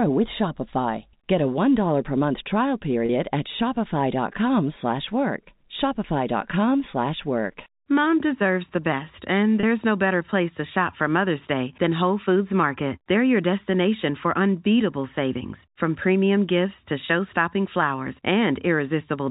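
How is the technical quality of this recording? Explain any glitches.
Two brief glitches interrupt the speech, and both are packet loss with pitch repetition.

They occur at 3.06 s, just after "per month trial", and at 9.60 s, between "deserves the best and" and "no better place". Each time about 30 ms of audio goes missing, which fits a single lost packet. The receiver bridges each gap by replaying the last pitch period. You hear a tiny held, buzzy sustain rather than a click or a moment of silence, and that is what separates this from a plain dropout.

The G.711 telephone coding is audible as a band limit at 4 kHz throughout.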